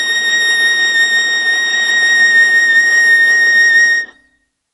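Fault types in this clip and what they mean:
MP3 compression: Throughout the music, nothing is heard above 11.4 kHz, and the remaining sound is plainly damaged, with a watery, swirling quality. This is likely MP3 encoding at a low bitrate, around 46 kbps. With so few bits, the encoder cuts all treble above a fixed frequency and drops the weaker frequency components, letting them flicker on and off between frames. That produces the swirl, the dulled top end and smeared attacks.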